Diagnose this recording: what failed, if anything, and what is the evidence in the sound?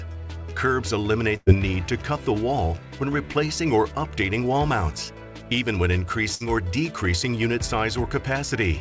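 Network stage, a burst of packet loss, twice. At 1.37 to 1.49 s the receiver stretches the last sound for about 94 ms, fading it out, and roughly 90 ms of audio never comes back. Same again at 6.35 to 6.43 s: about 56 ms filled, 60 ms gone.

Also network: a short concealed packet loss at 3.32 to 3.38 s. The jitter buffer patched about 23 ms by extrapolating what came before, then crossfaded back in, so you get a quick smear where roughly 30 ms went missing. Band-limiting at 8 kHz fits the G.722 call codec.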